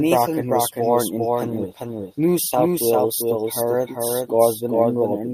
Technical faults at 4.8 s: doubled audio track

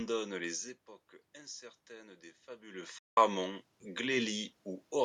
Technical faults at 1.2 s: none

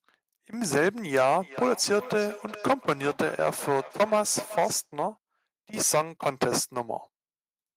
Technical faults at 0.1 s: none

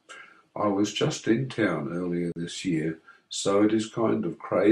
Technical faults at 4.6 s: none

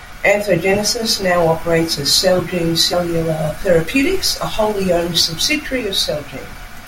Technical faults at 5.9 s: none

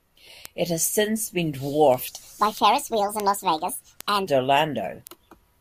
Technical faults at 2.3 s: word clock ticks; section at the wrong speed

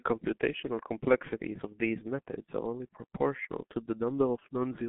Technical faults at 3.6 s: G.723.1 codec

